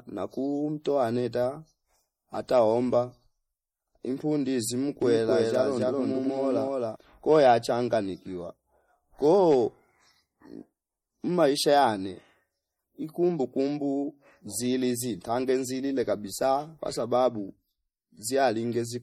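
This is a speech clip. Throughout, it sounds watery and swirly, with smeared attacks, plainly audible damage. MP3 compression at a low bitrate, perhaps near 48 kbps, is the likely cause. From 5.02 to 6.96 s there is a doubled audio track: a second copy of the speech, about as loud, trails around 300 ms behind. It is most likely from a second capture path or an out-of-step edit.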